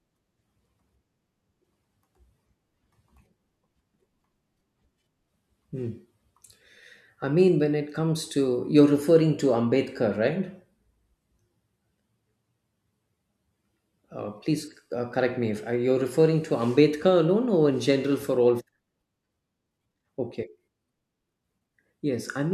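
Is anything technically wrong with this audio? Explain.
No, nothing technically wrong can be heard here.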